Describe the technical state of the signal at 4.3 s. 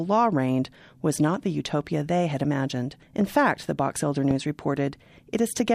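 A loud pop hits from 4.31 to 4.33 s, about 10 dB above the speech. A single voltage spike, likely from a plug or switch, sits over the continuing speech.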